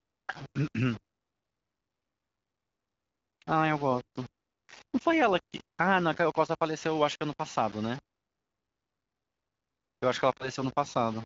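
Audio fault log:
throughout, low bit depth without dither: a grainy, gritty distortion rides on the speech and shifts with it, harshest on quiet passages, with a noise floor only about 25 dB below the signal. The likely cause is rounding to very few bits, roughly 6, with no dither.
10.38–10.49 s, lost AMR speech frames: a brief dip or warble breaks the speech, then it returns weak or rough for a moment. The wideband decoder filled in one missing 20 ms frame by repeating the previous frame's pitch and vocal tract settings at reduced gain.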